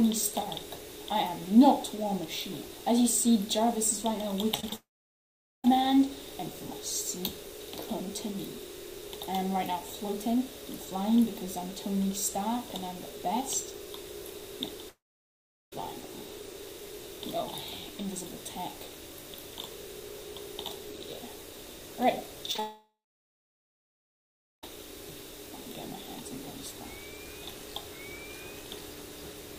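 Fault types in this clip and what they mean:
Repeated packet loss (robotic sound): From 4.55 to 4.73 s the sound turns choppy, with four small holes, the longest 28 ms, patched by stretching the preceding audio. About 40% of that stretch is filled-in sound rather than real audio.
Long network dropout: At 4.76–5.65 s, 14.89–15.73 s and 22.60–24.64 s the audio trails off into a brief fading buzz and then goes silent for most of each gap, over 1.7 s in the last. The likely cause is that no audio arrived for those stretches, so that part is lost.
Short concealed packet loss: Around 22.52 s, 22.54 s and 22.56–22.59 s there are quick smears, each filling a 10 to 20 ms hole by carrying the previous sound forward before blending back. They come just before the third dropout.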